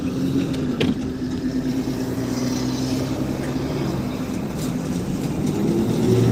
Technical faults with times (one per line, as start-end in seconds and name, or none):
none